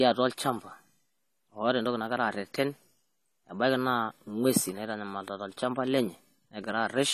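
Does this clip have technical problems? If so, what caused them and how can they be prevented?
Yes. Throughout the speech, nothing is present above 14.1 kHz. The top end stops abruptly, and the sound is dull and smeared. The coding damage is plainly audible. The likely cause is AAC compression at a low bitrate, which fits AAC-LC around 32 kbps. The encoder had too few bits, so it cut the high band and coarsely quantised what remained. Encoding at a higher bitrate, or keeping an uncompressed master, would prevent this.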